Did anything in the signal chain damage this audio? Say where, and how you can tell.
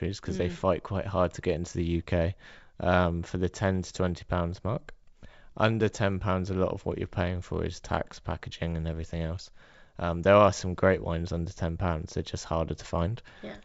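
No, nothing here points to damage, and the G.722 wideband telephone coding at 64 kbit/s that this speech went through leaves at most a faint trace of its own, with the band reaching up to about 7 kHz as that codec allows.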